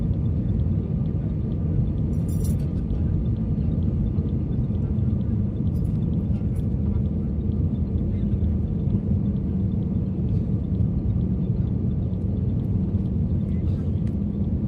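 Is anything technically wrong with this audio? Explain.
No, no technical faults are audible.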